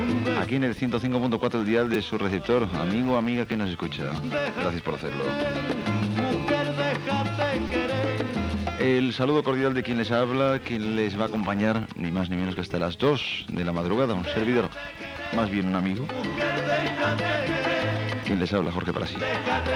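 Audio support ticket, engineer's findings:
Repeated buffer at 1.94 s, 3.52 s, 7.68 to 7.70 s and 12.57 s. Short clicks and a brief buzz, each a roughly 5 ms slice replayed with hard joins, fitting a 256-sample buffer. Playback underrun: new audio late, last buffer replayed, nothing appears lost.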